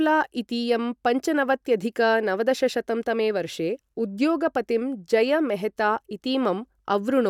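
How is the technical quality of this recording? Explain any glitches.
The technical quality of this recording is sound, with no glitches to explain.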